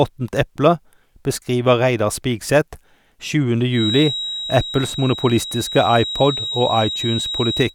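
A feedback whistle runs from 3.69 s to the end of the speech, a thin steady tone at 3.8 kHz sitting roughly 10 dB below the voice and swelling and fading slowly in level. The likely cause is a loudspeaker-to-microphone loop held just short of runaway feedback.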